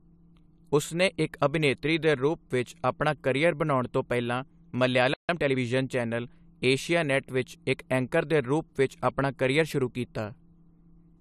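A speech recording in which the player most likely ran short of buffered data or had its output thread held up, producing a playback stall: from 5.14 s to 5.29 s the output goes silent for about 151 ms, cutting the speech off mid-flow before it resumes. That gap is long enough to hear as a clear break rather than a click, and the talker's phrasing is interrupted abruptly. To recover the lost ground, the player then applied time-compressed catch-up, trimming its backlog by removing short slices of audio and cross-fading across the joins. From 5.29 s to 5.59 s the speech runs at about 1.5 times normal speed while keeping its usual pitch, so it sounds rushed, settling back to normal pace around "ਚੈਨਲ ਏਸ਼ੀਆਨੇਟ ਵਿੱਚ ਇੱਕ".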